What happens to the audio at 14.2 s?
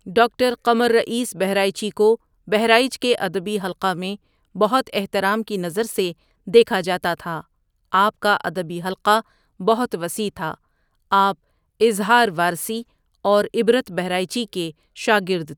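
Nothing goes wrong at 14.2 s; the speech carries on intact there, with no dropout, click, distortion or other fault.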